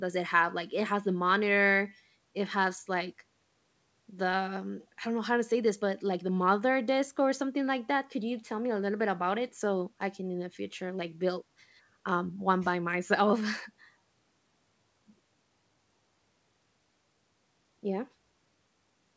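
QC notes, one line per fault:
No faults; call audio tops out near 8 kHz.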